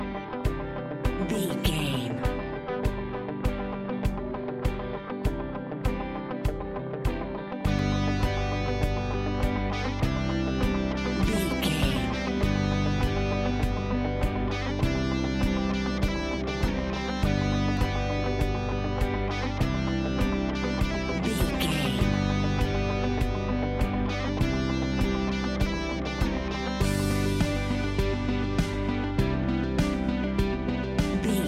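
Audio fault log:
7.79 s, 17.77 s, 27.75 s: audio missing between chunks. A very brief skip of roughly 20 ms, with the two sides butted together and no gap of silence, recurs about every 10 s. The regular spacing points to the likely cause: a recorder dropping samples at each chunk handover.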